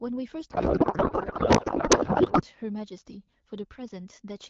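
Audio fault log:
0.51–2.43 s, codec payload misread: the speech turns into garbled, warbly noise that barely follows it. The AMR wideband frames look byte-aligned but are being unpacked as bit-packed, so every field lands in the wrong place until the framing matches again.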